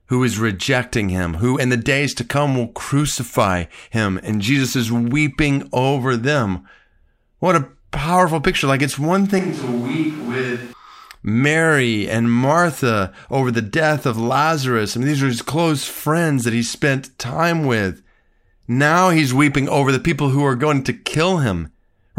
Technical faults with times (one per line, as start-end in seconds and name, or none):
9.39-10.73 switch to a distant microphone